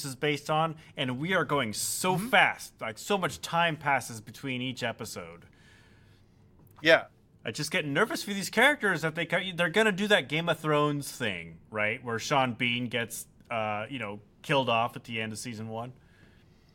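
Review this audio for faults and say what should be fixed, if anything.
Nothing needs fixing: the speech signal holds steady throughout, with no audible technical faults anywhere in the recording.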